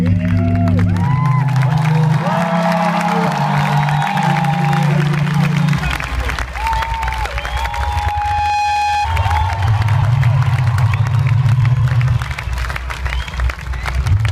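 At 7.35 s a loudspeaker feedback squeal begins. A single tone near 831 Hz swells out of the sound over roughly a second. It ends at 9.08 s. The microphone was picking up the loudspeaker it fed, and at this frequency the loop gain rose above one. The tone kept feeding itself and grew with every pass. At its peak it sits at about the same level as the rest of the audio.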